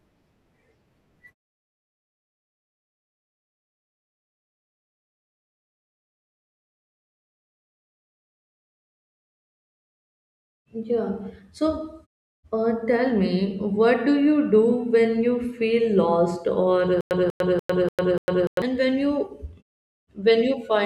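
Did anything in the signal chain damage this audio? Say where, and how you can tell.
Yes. From 17.01 to 18.62 s there is a stutter with silent gaps: a 191 ms fragment plays five times every 293 ms, each followed by 101 ms of digital silence. On a waveform this shows as identical repeated blocks separated by flat silent stretches. It is likely a stalled playback or stream buffer replaying its last fragment, so the audio for that span is lost.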